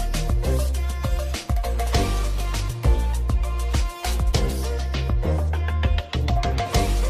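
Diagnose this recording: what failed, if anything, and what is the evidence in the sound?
The network side is the culprit: an adaptive stream at a lower bitrate. From 0.82 to 2.82 s the quality suddenly drops, with codec artefacts up, then snaps back, no gap. That fits the player briefly switching to a low-bitrate HE-AAC rendition when throughput dipped.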